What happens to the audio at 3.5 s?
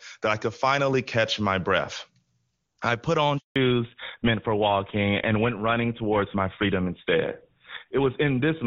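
Right after "I put on", the speech cuts out in a handover gap from 3.38 to 3.56 s, about 180 ms of silence. The call was switched between networks and no speech frames came through during the changeover, so the sound decays within a few tens of milliseconds and stays silent until the new link takes over. It differs from a brief packet-loss dropout because what follows sounds different, not the same as before.

From 3.56 s to the end there is a fallback to narrowband. Before the gap, the speech has the open, airy top of HD Voice wideband coding with little audible codec damage. After it, nothing above 4 kHz remains, and the voice turns duller and rougher. That sound fits a GSM full-rate codec at 13 kbit/s. Unlike a low-pass filter or muffling, this change begins exactly at the handover gap and brings a rougher texture along with the lost treble.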